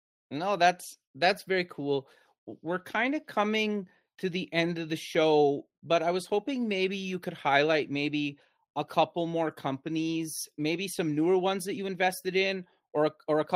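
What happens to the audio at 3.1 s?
Nothing goes wrong at 3.1 s; the speech there plays through intact, with no dropout, glitch or other fault.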